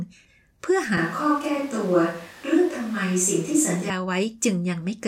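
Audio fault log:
0.98–3.90 s, switch to a distant microphone: the speech abruptly turns roomy, hollow and thin in the bass, at much the same level, with room noise roughly 25 dB below it. It is likely that the close microphone dropped out and a more distant one took over.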